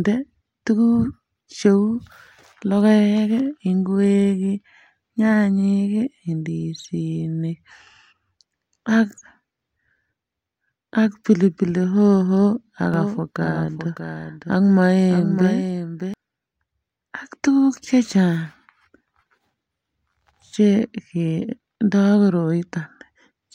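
From 12.94 s to 16.14 s the speech is joined by a doubled audio track: a second, full-band copy trailing roughly 0.7 s behind and something like 10 dB quieter, switching on and off abruptly at those points. Unlike an echo or reverb, it has no decaying tail, no repeats and no room colouring. It is the same signal laid in once more. A second, slower capture path or a misaligned edit is the likely cause.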